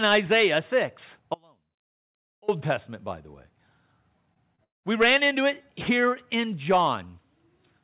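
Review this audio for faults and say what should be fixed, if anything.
Audio dropout to a faint residue, 1.34 to 2.48 s: the speech cuts abruptly to a faint trace about 30 dB down, likely a momentary input disconnection. On the waveform it is a sudden near-flat stretch.

Short concealed packet loss, 4.34 to 4.38 s and 4.56 to 4.60 s: the decoder bridged missing frames by extending the preceding sound, heard as brief smears. A spectrogram shows stretched, blurred harmonics.

Long network dropout, 4.64 to 4.85 s: concealment buzz fades into roughly 170 ms of silence, likely from lost packets. On the waveform it is a decaying tail, then a flat gap.

Securing the input connection and using a more stable network with a larger jitter buffer would prevent these faults.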